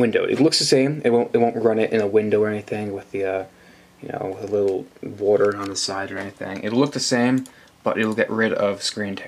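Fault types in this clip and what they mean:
No fault types are present in this clip.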